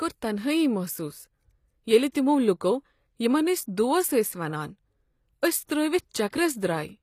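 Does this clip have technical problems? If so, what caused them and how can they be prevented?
Yes. Throughout the speech, the treble sounds synthetic: s sounds come across gritty and lispy, and nothing is present above 14.9 kHz. This is likely HE-AAC compression at a low bitrate, around 24 kbps by the sound of it. The codec keeps only the lower spectrum and fakes the top by copying lower bands upward under a coarse envelope, so upper harmonics fail to line up with the real ones. Encoding at a higher bitrate, or with plain AAC instead of band replication, would prevent it.

There is also pre-echo: a brief hiss just ahead of sharp attacks, from 2.12 to 2.15 s (about 28 ms) and from 6.30 to 6.33 s (about 26 ms), leaving those onsets soft and smeared. The transform coder spreads quantisation noise across its whole block, so noise sized for a loud attack late in the block also fills the quiet moment before it. 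Giving the encoder more bits and enabling its short-block switching for transients would prevent it.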